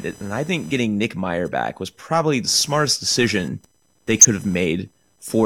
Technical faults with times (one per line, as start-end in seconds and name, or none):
0.00-5.46 computer activity noise
1.49-1.52 corrupt frame decoded
4.18-4.25 corrupt frame decoded